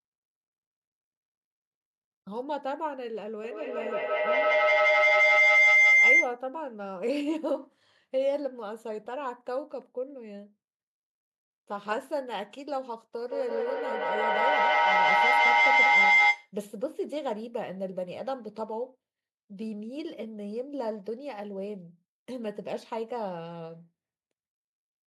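Feedback howl at 3.44 to 6.43 s and again at 13.14 to 16.54 s: sound from a loudspeaker re-enters a nearby microphone, gaining level each pass, so a tone near 2 kHz swells to about 12 dB and about 11 dB above the speech, with the loop repeating roughly every 150 ms.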